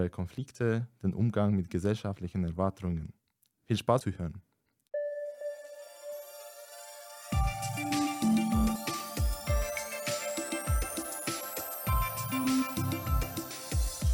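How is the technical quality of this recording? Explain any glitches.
The recording has one recurring glitch: three abrupt skips at 4.01 s, 8.76 s and 13.51 s. This is audio missing between chunks. The even spacing suggests the processor likely works in 5-second blocks and drops roughly a third of a second at each handover, splicing the two sides together with no gap. Each skip sounds like a sudden jump forward in the sound. On a waveform the envelope changes abruptly at each join, and a spectrogram shows a vertical seam where the texture doesn't line up.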